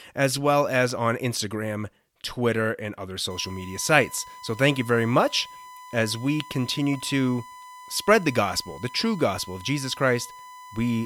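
From 3.30 s to the end, a USB whine sits under the speech. It holds a fixed pitch at 1 kHz, about 20 dB below the speech. The pitch matches the 1 ms USB frame rate. Current drawn by the bus leaks into the audio through power or ground.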